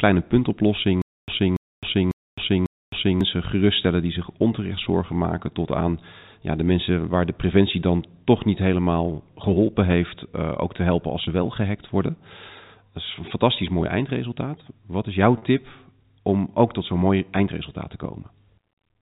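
Speech heard through a telephone-band channel (the narrow G.711 bandwidth itself is intact) has two faults. From 1.02 to 3.21 s, just before "geruststellen die zich onterecht", a stutter with silent gaps: a 284 ms fragment plays four times, each followed by about 264 ms of dead digital silence, so it returns every 548 ms. The likely cause is a stalled player or stream that replayed its last buffer on each retry and then ran dry, so the audio for that stretch is lost. At 15.38 to 15.42 s, right after "is jouw", there is packet loss with pitch repetition: a brief, slightly held buzz bridges a 40 ms hole, which fits two lost 20 ms packets. The receiver filled the gap by repeating the last pitch period instead of dropping to silence, and the loss was short enough that the sound carries on without a dropout.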